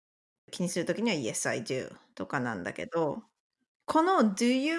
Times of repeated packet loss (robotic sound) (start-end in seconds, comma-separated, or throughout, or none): none